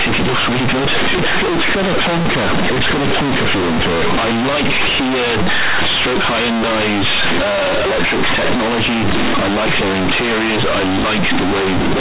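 Throughout, the speech is extremely loud, harsh and buzzy with heavy noise in the pauses: companded audio read as linear, where mu-law bytes play as raw 8-bit samples without expansion.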